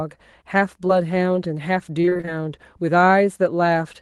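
Speech clip with a short concealed packet loss at 0.87–0.91 s: about 16 ms of audio was patched by extending the preceding sound, leaving a brief smear rather than the silent gap of a plain dropout. From 2.01 to 2.29 s, repeated packet loss (robotic sound) sets in. Seven closely spaced gaps, the longest 24 ms, are each filled in turn, so about half that stretch is concealed and sounds choppy rather than a single blip.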